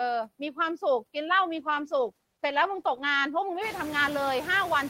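Noise suppressor artifacts run through the whole speech clip. The suppressor pulls down every band it judges to be steady noise, frame by frame, by about 17 dB, so the background sinks between phrases and swells under the talking. This is clearest after about 3.5 s, when the room noise rises to sit about 16 dB below the speech.

A call bitrate drop runs from 1.54 s to 4.31 s. The bandwidth estimate fell and the encoder coded more coarsely, so the speech turns rough and watery, with the highs dulled. The bitrate falls from roughly 32 kbps to 13 kbps, and the worst stretch lasts about 1.45 s.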